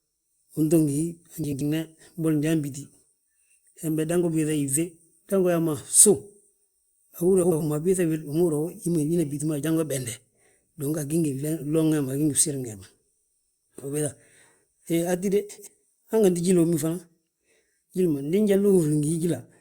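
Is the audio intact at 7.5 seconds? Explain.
No. From 7.43 to 7.61 s the speech turns into a garbled flutter. These are frames out of order: two neighbouring 85.3 ms blocks, which fits runs of four codec frames, were decoded swapped, so the halves play exchanged without losing time.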